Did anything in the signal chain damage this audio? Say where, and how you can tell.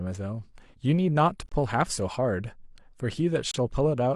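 Yes, at the playback stage, where a gap between stream segments opens twice. The timestamps of consecutive segments don't quite meet, so the player pads the shortfall with digital silence. Hard-edged dropouts in the speech run from 1.49 to 1.52 s (about 26 ms) and from 3.51 to 3.54 s (about 29 ms). Their spacing, roughly 2 s apart, fits 2-second segments. Nothing is cut out; the holes push the following audio slightly later.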